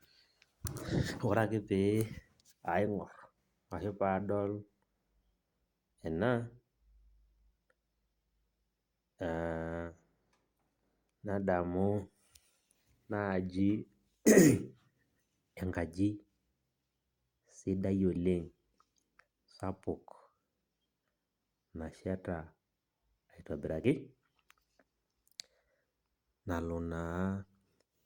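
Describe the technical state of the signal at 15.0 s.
At 15.0 s the speech signal is intact, with no audible fault at that moment.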